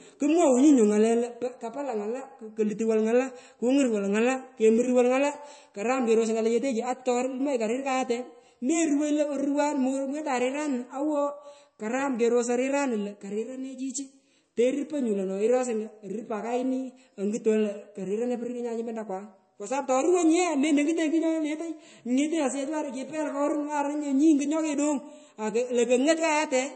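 Right through the speech there's a hard ceiling at 8.3 kHz and plainly audible watery smearing, likely MP3 compression starved of bits, pointing to roughly 33 kbps.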